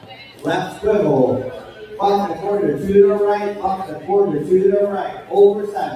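A noise suppressor designed for speech was applied to music or sounds, so steady and sustained parts are treated as noise and pulled down, making the level swing by roughly 10 dB. The noise suppressor cut sounds from 0.0 to 0.44 s, 1.58 to 1.96 s, 3.83 to 4.09 s and 5.09 to 5.33 s, sinking them by about 10, 8, 7 and 9 dB.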